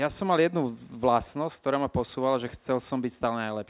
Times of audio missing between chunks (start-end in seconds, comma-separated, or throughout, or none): none